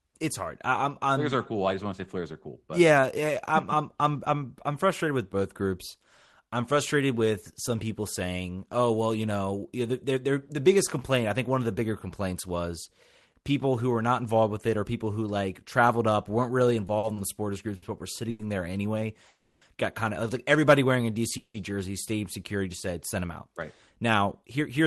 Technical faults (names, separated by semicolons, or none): short stall from a late packet; call audio freeze; jitter buffer speed-up